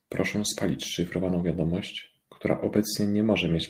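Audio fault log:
1.39–1.53 s and 2.75–2.77 s, lost packet rebuilt from error correction: low-bitrate copies carried by later packets filled 80 ms and 20 ms of speech, so there's no gap, but those stretches sound rougher and noisier.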